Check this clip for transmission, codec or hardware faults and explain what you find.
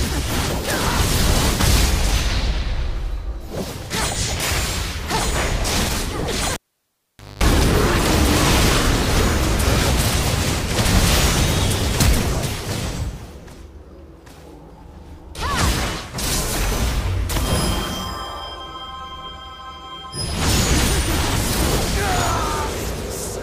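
There is one hardware fault: a cable pulled and plugged in, from 6.54 s to 7.43 s. A pop marks the break, then the signal drops to near silence for about 0.85 s as the connection is lost. During reinsertion, only the plug tip makes contact at first, so the unshielded conductor picks up a 50 Hz mains buzz lasting about 0.22 s. A second pop follows as the sound returns.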